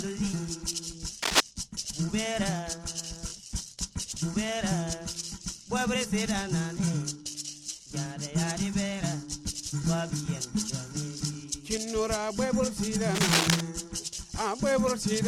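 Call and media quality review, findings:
Cable scratch noise at 1.22–1.40 s and 13.14–13.61 s: dense, uneven broadband bursts louder than the sound, likely a worn cable or connector. They show as ragged vertical smears on the spectrogram.

Overlapping chunks at 3.30, 7.32 and 11.34 s: 20 ms replayed at each join, heard as a click or stutter. The roughly 4 s spacing suggests 4 s processing blocks, with a duplicated waveform segment at each join.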